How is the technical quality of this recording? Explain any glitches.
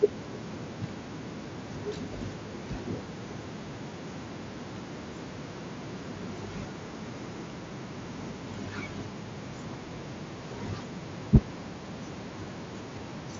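One brief glitch stands out, against a Bluetooth mSBC headset path whose content stops near 7.6 kHz. From 11.35 to 11.37 s there is microphone overload, likely from input gain set too high. The peaks ran about 4 dB past the converter's ceiling and roughly a third of the samples in that stretch were flattened at the limit. Squaring off the waveform tops this way adds harsh distortion, heard as a short crackling bite on that syllable.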